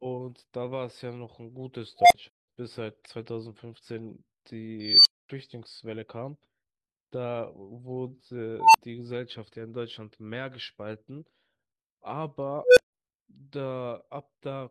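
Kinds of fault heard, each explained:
Unstable filter: A recursive filter in the chain runs with coefficients that push it past stability, so its output feeds back on itself and grows until the arithmetic overflows and the output drops out. Four times in this speech, a pure tone swells over the talking in 0.12 to 0.25 s, hits clipping, then cuts to silence for 40 to 240 ms. The tone sits at around 700 Hz, 5 kHz, 1 kHz and 500 Hz.
AAC frame loss with muting: Several consecutive AAC frames never reach the decoder, which fills their spectrum with zeros instead of guessing at the missing content. Because each frame's window overlaps its neighbours, the sound tapers down into the gap and back up afterwards rather than stopping abruptly. Here the speech vanishes for about 0.21 s starting near 2.27 s, which fits a run of five frames, leaving a soft-edged hole.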